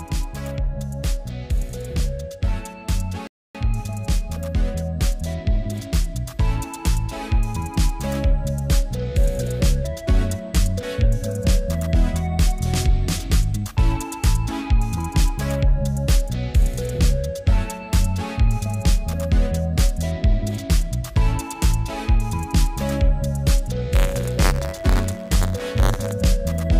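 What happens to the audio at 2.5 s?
Nothing goes wrong at 2.5 s; the audio plays through that moment intact, with no dropout, click, distortion or other fault.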